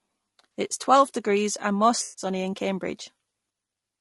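Low-delay AAC compression runs through the whole recording and is the likely cause of the rough, grainy texture on the speech. This codec codes audio in very short frames, which resolve the pitch harmonics coarsely, so noise fills the spaces between them and the upper band sounds thin and synthetic. The damage is plainly audible and points to a low bitrate of around 32 kbps, where short frames leave too few bits for clean detail.

AAC frame loss with concealment occurs from 2.03 to 2.25 s, just after "is twelve degrees and". About 140 ms of coded audio went missing, which fits a run of roughly seven lost frames. The decoder covered the gap by reusing and reshaping the last good spectrum instead of real signal, so the passage turns smeared, noisy or phasey before normal decoding resumes.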